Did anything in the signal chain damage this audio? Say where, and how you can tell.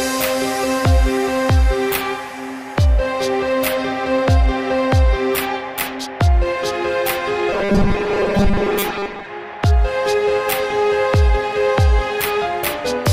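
Yes. From 7.53 to 9.27 s the sound turns into a rigid, metallic buzz locked at 200 Hz: robotic sound from repeated short buffers. The likely cause is a driver or buffer underrun, with a 5 ms block replayed across most of that stretch while the real audio was skipped.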